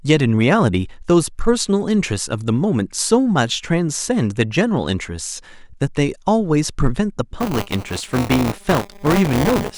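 Buffer tearing runs from 7.4 s to the end of the clip at about 9.8 s. The program filling the playback ring buffer and the hardware draining it have drifted until they overlap inside every period. Each buffer therefore carries a small slice of stale speech, around 20 ms old, spliced in with abrupt joins. Those joins recur at 200 Hz, which suggests a buffer about 5 ms long, and they lay a steady robotic buzz over the speech.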